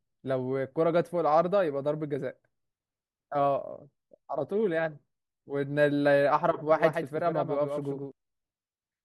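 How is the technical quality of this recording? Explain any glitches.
One glitch affects the technical quality of this speech recording: a doubled audio track between 6.70 and 8.12 s. For that stretch the speech is joined by a second, full-band copy of itself trailing by about 150 ms and roughly 5 dB quieter. It is likely a second capture path or a misaligned edit holding two copies. The copy is dry, with no decay, and cuts in and out abruptly, so the speech sounds stuttered, like a slapback echo. On a spectrogram each syllable's pattern repeats a fixed distance to the right, slightly fainter. The waveform shows sharp edges where the copy starts and stops.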